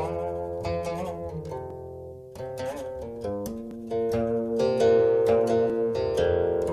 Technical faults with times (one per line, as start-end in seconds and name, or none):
1.70-5.70 periodic USB or driver dropouts